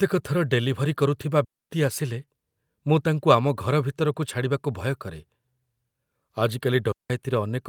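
Right after "ଥର ଡେଲିଭରି କରୁଥିବା", at 1.44 s, there's a digital wireless dropout. The link lost too much data, so the receiver muted for about 256 ms, until 1.70 s. You get a clean hole of near silence with no noise burst on either side.

From 2.21 to 2.23 s comes a lost packet rebuilt from error correction. Roughly 20 ms, which fits a single lost packet, was played from the low-bitrate copy carried in the next one. There's no gap, just a brief rougher, noisier patch.

Right behind it, from 2.25 to 2.29 s, is a short concealed packet loss. About 20 ms never arrived, and the decoder stretched the previous sound across it for around 13 ms before blending back. It comes through as a quick smear or wobble.

At 6.92 s a second digital wireless dropout mutes the audio for about 179 ms, to 7.10 s. It's the same clean near-silent gap, just shorter.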